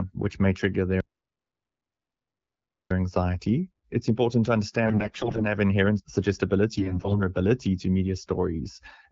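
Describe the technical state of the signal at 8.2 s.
At 8.2 s the speech is intact, carried through the AMR wideband (HD Voice) codec with no fault at that moment.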